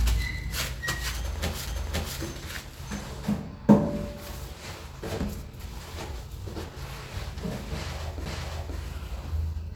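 A recording of sounds with two brief ticks, at 1.67 s and 8.25 s, where the audio mutes for a few milliseconds and resumes from a different point. These are CD skips: the laser jumped to another turn of the disc's spiral.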